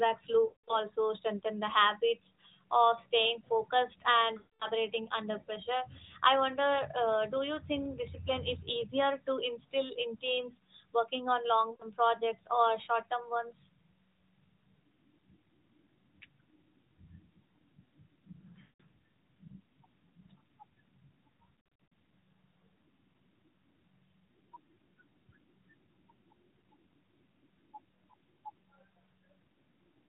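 The speech smears into a drawn-out, fading tone and then drops to silence at 0.46–0.80 s and 4.38–4.68 s (about 220 ms each) and at 18.62–18.81 s (180 ms), and dips briefly at 11.72–11.83 s (80 ms). At 21.61–21.92 s it breaks into a choppy warble. These are lost AMR speech frames. The decoder stretched the last good pitch and vocal-tract settings with falling gain, and the 12.2 kbps narrowband codec leaves only light coding damage.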